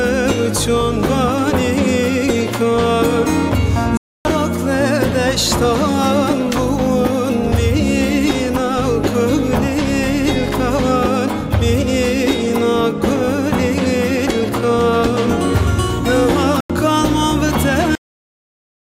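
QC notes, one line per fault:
3.97–4.31 s and 16.60–16.70 s: corrupt frame muted. The sound drops abruptly into silence, first for about 0.34 s, then about 0.09 s. Damaged compressed frames were rejected and replaced with silence, which fits several frames lost each time. The audio resumes on time afterwards.
17.95 s: cut-off end. The audio stops mid-sound and falls straight to digital silence with no decay. The final buffers were never written or played, so the sound is simply truncated rather than fading out.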